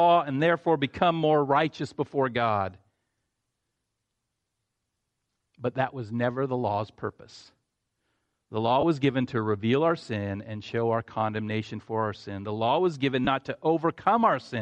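Throughout the speech there is a breathy, grainy edge on the upper frequencies, as if fine noise had been sprayed over the sibilants and the top of the voice. This is likely Bluetooth LC3 compression, the transform codec of LE Audio. It drops much of the upper spectrum and refills those bands with shaped noise. The damage is plainly audible, which fits a moderate bitrate around 48 kbps with 10 ms frames.

From 8.81 to 8.83 s the voice briefly loses definition and turns into a short noisy smear before snapping back. The same thing happens from 13.25 to 13.27 s. These are lost LE Audio frames, each about 20 ms, consistent with two consecutive 10 ms frames going missing. The decoder covered each gap by repeating the previous spectrum with randomised signs. That keeps the level roughly right but scrambles the detail into noise.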